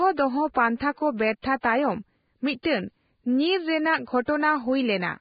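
Throughout the speech, the sound is hissy and grainy, with nothing above 4.9 kHz. This is most likely heavy Vorbis compression at a very low rate, consistent with a bitrate of around 15 kbps. The codec keeps a smooth spectral envelope but quantises the fine residue so coarsely that detail turns into noise. On a spectrogram the treble stops at a hard ceiling, and harmonics below it look speckled rather than clean.

Pre-echo appears four times: at 0.54 s, just before "ᱯᱟᱱᱛᱷᱟ ᱠᱚ"; from 1.42 to 1.44 s, right after "ᱫᱚᱦᱚ ᱯᱟᱱᱛᱷᱟ ᱠᱚ"; from 1.61 to 1.64 s; and from 2.63 to 2.65 s. Each time a sharp onset sits late in a transform block, and the noise sized for it spreads back into the quieter moment before it, across 18 to 31 ms. A short hiss anticipates each attack and softens it. On a waveform, low fuzz precedes the transient, and a spectrogram shows a thin broadband smear leading into the attack.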